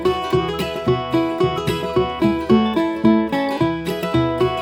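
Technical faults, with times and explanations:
Throughout: audio read two samples at a time (double speed). Sample pairs were taken as one frame, so playback runs 2x fast and 12 semitones higher. On a spectrogram, harmonics are stretched upward and the waveform looks horizontally squeezed.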